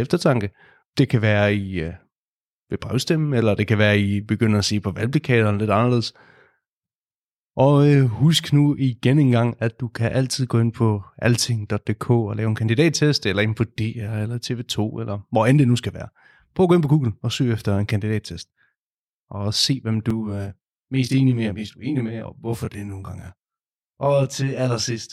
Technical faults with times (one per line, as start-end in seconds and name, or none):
20.10-25.12 channel delay (comb filtering)